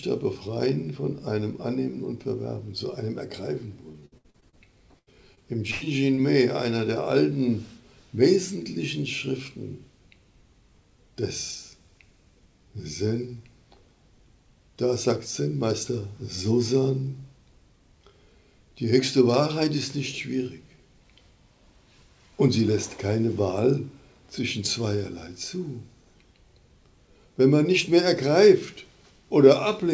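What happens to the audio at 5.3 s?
Repeated packet loss (robotic sound) runs from 4.99 to 6.19 s. Four gaps, the longest 106 ms, are filled by stretching the preceding sound, which makes the audio choppy and robotic.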